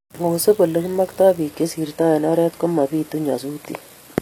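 From 1.41 s to the end, the speech suddenly loses its top end, with nothing above 14.9 kHz, and codec artefacts rise, with no gap at the switch. This is an adaptive stream at a lower bitrate: the player swapped mid-stream to a cheaper encoding, which sounds like a drop from AAC-LC around 96 kbit/s to HE-AAC around 24 kbit/s.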